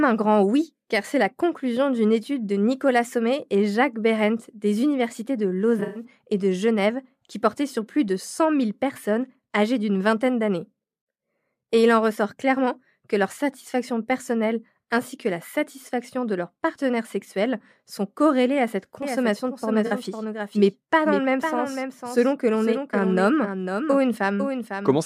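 At 5.79 s a smeared, hazy patch replaces the speech for about a quarter of a second, ending at 6.04 s. It is AAC frame loss with concealment. Around 150 ms of audio went missing in nearly one unbroken run, which fits about seven lost frames. The decoder papered over the hole by reusing the last good spectrum, so the gap comes out noisy and phasey rather than silent.

From 19.02 s to the end, every sound is followed by an exact second copy about half a second later, roughly 5 dB quieter. The repeat carries no room tail or colouring, and it begins abruptly. This doubled audio track is likely the same signal mixed in a second time through a slower path running alongside the first. Inside that doubled section, at 19.86 s, a brief blurred blip of about 43 ms is a further AAC frame loss with concealment, consistent with two lost frames.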